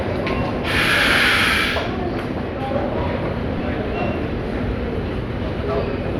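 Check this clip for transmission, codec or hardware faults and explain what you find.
One transmission fault is audible. From 3.58 to 3.60 s, a brief noisy smear replaces the sound. These are lost LE Audio frames, about 15 ms of Bluetooth audio, which fits two 7.5 ms frames. The LC3 decoder filled the gap by repeating the last spectrum with randomised signs, so any tonal content breaks into noise.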